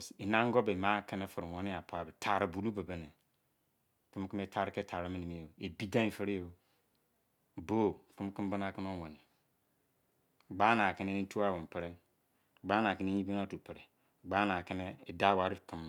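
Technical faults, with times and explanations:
Nothing to flag here: the speech comes across without any technical faults to point to.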